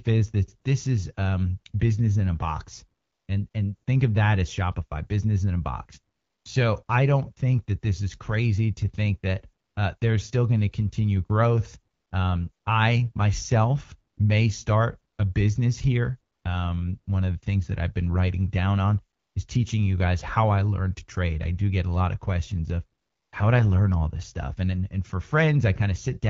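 Speech where AMR comfort noise kicks in thirteen times between 3.01 and 23.31 s: the phone judged pauses silent and stopped sending speech frames for 20 to 320 ms, so the receiver substituted smooth synthetic noise, making the background switch in and out, longest after "lot of questions of".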